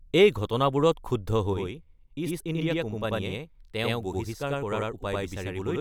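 Speech with a channel delay (doubling) from 1.53 s to the end: one channel runs about 93 ms late, which fits a 4096-sample buffer, and the mono sum adds an equal-level slap echo. The waveform shows each onset repeated 93 ms later, and the spectrogram shows matching ghost edges.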